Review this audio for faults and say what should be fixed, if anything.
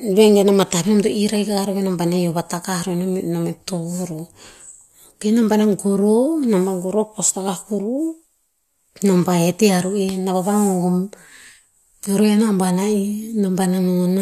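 Nothing needs to be fixed, as the review finds no faults in this audio.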